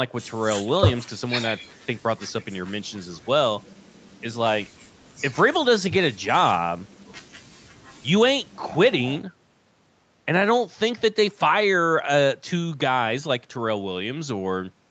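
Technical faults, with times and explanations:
No technical faults detected.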